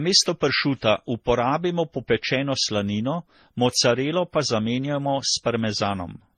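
Across the whole of the speech clip the audio carries a layered, smeared coding texture consistent with transcoding between lossy codecs. It most likely passed through a low-bitrate MP3-style encode, then a Vorbis-style one, and finally HE-AAC. Each later encoder spends its bits re-coding the earlier artefacts while adding its own, so their different artefacts are heard together. Nothing survives above 18.3 kHz, the ceiling that persisted through the chain.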